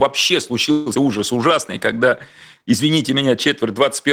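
At 0.71 to 0.88 s the speech stalls into a fading buzz, likely a call audio freeze from late packets, then resumes where it stopped, so nothing is lost. At 0.94 to 0.97 s comes a skip ahead: roughly 70 ms of speech is dropped and the two sides are joined almost directly, a jump rather than a pause.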